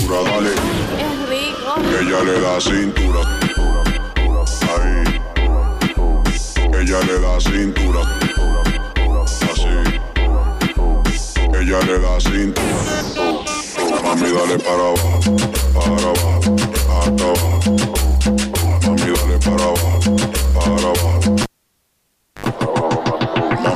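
At 21.43 s a pop cuts the sound to near silence for about 0.98 s, then a 75 ms burst of 50 Hz mains buzz and a second pop bring it back by 22.46 s: a live cable pulled and plugged in, humming while only the tip touched.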